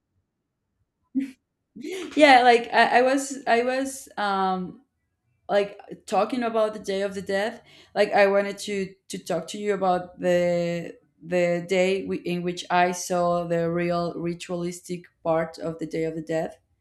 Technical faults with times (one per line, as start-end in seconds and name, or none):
none